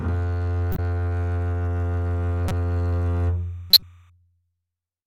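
Corrupt frame decoded at 0.72 to 0.79 s: bits inside a compressed frame of the music were flipped, yet the decoder played it anyway, so misread gains and codes threw energy into the wrong frequencies. The result is a short squeaky burst peaking around -10 dBFS, which fits roughly three damaged frames.

Timecode bleed from 1.80 to 4.10 s: linear timecode running at 29.97 frames per second leaks in from a neighbouring track or cable. Its square wave flips between tones near 1 kHz and 2 kHz, giving a steady chirping warble about 40 dB below the music.

Corrupt frame decoded again at 2.45 to 2.52 s, a briefer blip near -15 dBFS consistent with a couple of bad frames, and at 3.70 to 3.83 s, the loudest and longest burst, reaching about -5 dBFS and spanning what sounds like around four frames.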